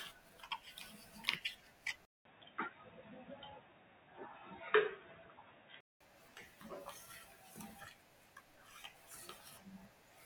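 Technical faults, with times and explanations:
2.05 to 6.01 s, input switched to a poorer device: the system likely changed its input in mid-recording to a lower-grade microphone or headset path. After a 200 ms silence at the switch, the speech loses everything above 3.8 kHz, so it turns dull and boxy, with a faint new background noise well below the speech. Loudness stays about the same. The fuller, brighter sound returns at 6.01 s.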